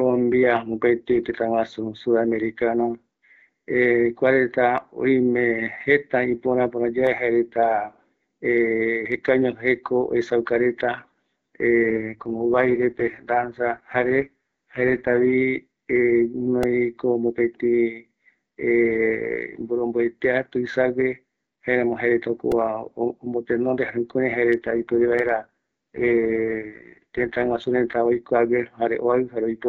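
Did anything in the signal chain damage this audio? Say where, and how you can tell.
Yes. Repeated buffer faults at the driver stage click at 7.07, 16.63 and 22.52 s. Late audio made a tiny block, fitting 64 samples, replay.

An AMR rate drop on the radio link roughens speech from 11.88 to 15.34 s and 24.57 to 28.25 s. The codec fell from 12.65 to 6.6 kbit/s.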